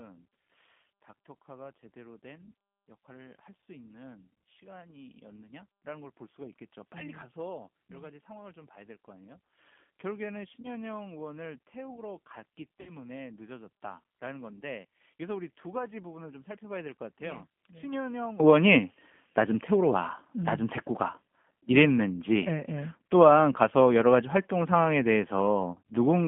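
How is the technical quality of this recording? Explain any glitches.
The quality is poor, with coding damage throughout, a weak opening section, and three brief dropouts.

The G.729 codec is audible from start to finish: the speech sits in a 150 to 3400 Hz telephone band and sounds rough and synthetic, which fits an 8 kbit/s model-based coder rather than simple band-limiting.

From 0 to 18.4 s the level sits about 20 dB low and sounds faint. The likely cause is one channel inverted, so the centred speech cancels in a mono sum.

VoIP packet loss concealed by the speech codec occurs at 10.62 to 10.68 s (20 ms), 12.81 to 12.96 s (60 ms, pointing to three packets), and 25.74 to 25.78 s (20 ms). At each point the decoder stretches the last sound into a fading buzzy tone or coloured noise, and the speech stays weak briefly afterward. Unlike a clean dropout to silence, these gaps are filled with that sound.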